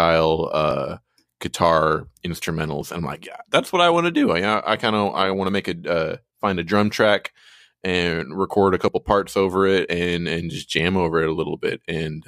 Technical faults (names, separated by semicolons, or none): dropped buffer (overrun)